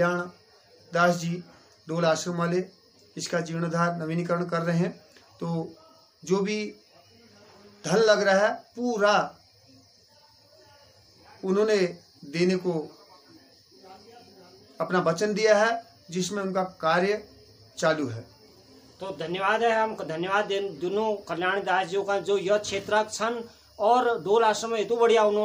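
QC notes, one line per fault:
No fault found.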